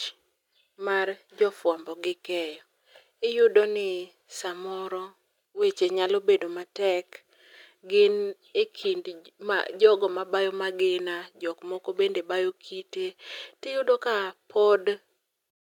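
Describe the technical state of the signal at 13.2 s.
At 13.2 s the speech signal is intact, with no dropout, distortion, glitch or other technical fault to be heard.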